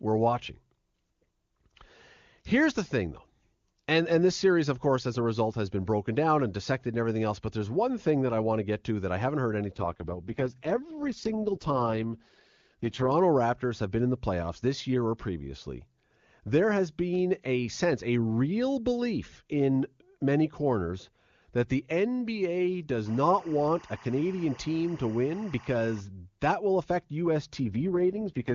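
At 9.74 s the speech suddenly turns rough and buzzy, with a raspy, synthetic edge, until it clears at 13.12 s. The bandwidth doesn't narrow and nothing drops out. That's an AMR rate drop: the network pushed the AMR-WB encoder down to its lowest rungs to free up bits for error protection. The roughness fits a fall from the clean 23.85 kbit/s HD Voice rate to 6.6 kbit/s, where the codec's vocal tract model gets coarse enough to hear.

From 23.06 to 26.01 s there's a steady chirping warble sitting behind the speech, flicking between two pitches near 1 and 2 kHz, roughly 25 dB down. That's timecode bleed. Linear timecode from a nearby track or cable is leaking into the audio, and its square wave switches between those two tones. The regularity of the chirp fits 24 fps code.

The same AMR rate drop returns at 27.66 s and runs to 28.53 s. The voice goes gritty and synthetic again, with the band unchanged, consistent with another step down from 23.85 to 6.6 kbit/s.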